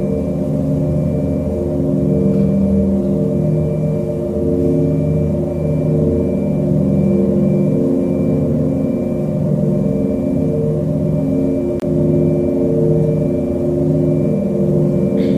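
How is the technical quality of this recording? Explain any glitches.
The recording has one glitch. At 11.80 to 11.84 s, a corrupt frame was muted: damaged compressed data was rejected by the decoder and replaced with silence, leaving an abrupt 41 ms gap, which fits about two frames.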